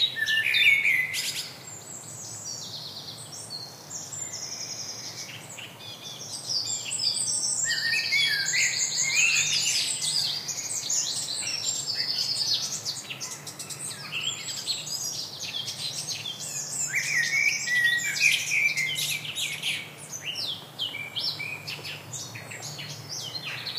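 No technical faults can be heard anywhere in the recording; the signal holds steady throughout with nothing in it pointing to a problem in capture, processing or playback.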